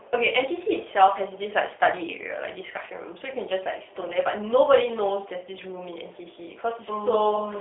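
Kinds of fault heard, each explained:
G.729 codec: The whole clip runs through a low-rate speech coder that rebuilds each short frame from a vocal tract filter, a pitch predictor and a few coded pulses, and the roughness fits an 8 kbit/s G.729 codec. The band sits roughly between 300 Hz and 3.6 kHz, so the speech sounds thin and boxy. The damage is plainly audible as a slightly grainy, synthetic edge on every phrase.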